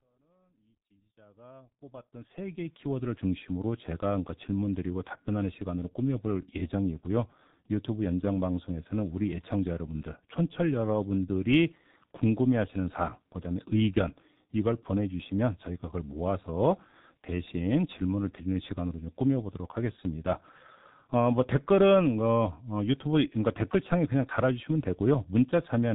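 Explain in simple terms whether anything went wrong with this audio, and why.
The G.723.1 codec damages this speech from start to finish. This early internet-phone codec squeezes sound into 30 ms chunks and discards everything above 4 kHz, so the speech comes out muffled and hoarse, with smeared consonants. The gentle fade-in over the first 3.2 seconds is ordinary editing.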